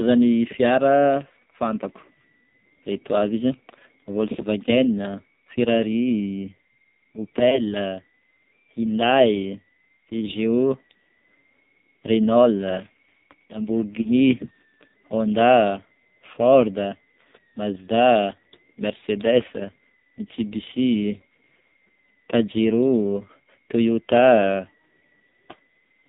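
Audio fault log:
Throughout: AMR narrowband mobile codec. The speech passes through AMR-NB, which samples at 8 kHz, so nothing above 4 kHz survives. At the low rate this clip suggests, around 5.9 kbps, the coding damage is heavy: too few pulses per 5 ms drive the vocal tract model, giving a buzzy, synthetic voice. On a spectrogram, energy stops at a hard ceiling at 4 kHz, and harmonics look smeared and blocky instead of finely striated.
7.50–7.66 s and 14.02–14.10 s: lost AMR speech frames. Each event fits a single lost 20 ms frame. The decoder fills the gap by repeating the last good pitch and vocal tract settings at falling gain, so each one is heard as a brief dip or warble in the voice. The first disturbance spans about 0.16 s and the second about 0.08 s. On the waveform each appears as a short sag in amplitude. On a spectrogram it shows as a frozen, fading stretch of harmonics.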